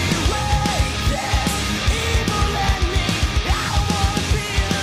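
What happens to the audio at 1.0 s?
Nothing goes wrong at 1.0 s: the audio plays through that moment intact, with no dropout, click or other fault.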